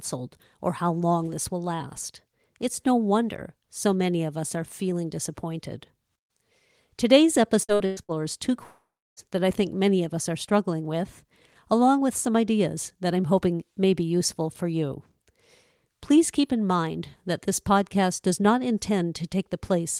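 From 7.63 to 8.18 s the speech turns choppy and robotic, the signature of repeated packet loss. Five short holes, the longest 110 ms, were each patched by stretching the preceding sound, so about half of this half-second is synthetic fill. Parts of syllables drop out. On a spectrogram the harmonics freeze into flat, smeared horizontal bands between normal stretches, and the waveform shows repeated, near-identical cycles in each patch.

At 8.63 s the audio stops, returning at 9.20 s with roughly half a second of the speech missing. This is likely a long network dropout. The last sound is extended as a fading buzz or hiss before about 330 ms of silence sets in. The waveform shows a decaying, uniform-looking tail collapsing to a flat line, while the spectrogram shows a frozen smear that dims into blank space before the speech resumes mid-stream.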